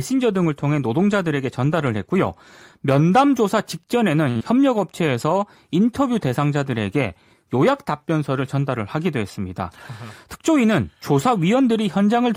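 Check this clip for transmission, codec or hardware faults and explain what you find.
Three network-related faults are audible, clustered around 4.3 s and again near 10 s.

From 4.29 to 4.37 s there is a short stall from a late packet. The jitter buffer ran dry, so the receiver held the last sound for about 58 ms until the packet arrived, then resumed where it left off. It sounds like a stretched sustain with a slight buzz or dip. Unlike a loss, nothing is skipped.

Directly after, from 4.37 to 4.42 s, comes a short concealed packet loss. About 40 ms of audio never arrived, and the receiver bridged it with roughly 31 ms of synthesised continuation before blending back. It sounds like a brief smear or wobble, and unlike the stall, real material is gone.

From 9.59 to 10.71 s there is a jitter buffer speed-up. The buffer held more audio than its target, so the receiver trimmed short pitch-period slices, about 50 ms in total, running the speech at 104% speed. 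The pitch stays unchanged, unlike a resampling error.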